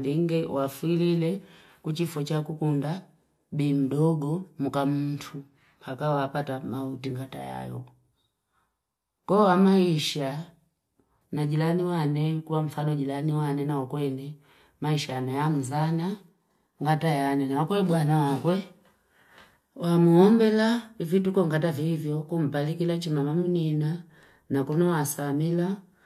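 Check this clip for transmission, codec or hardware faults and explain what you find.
No faults detected.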